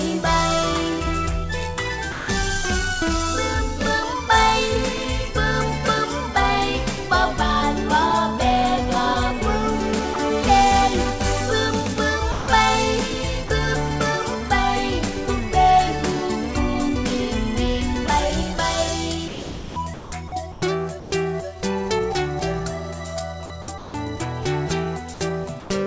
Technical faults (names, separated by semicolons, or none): sound dropped by the voice detector; sound chopped by the voice detector